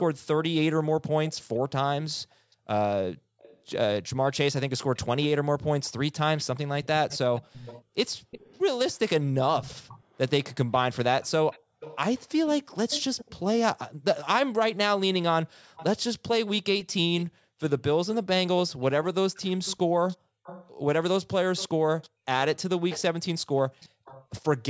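Speech, where an echo canceller on a speakerphone end likely failed to remove its loudspeaker's pickup. The result is an echo leak: a delayed copy, lagging 255 ms and growing to 373 ms, about 15 to 20 dB down, at 0.0–1.59, 2.51–8.6, 9.55–14.06, 15.76–15.84 and 16.84–24.26 s.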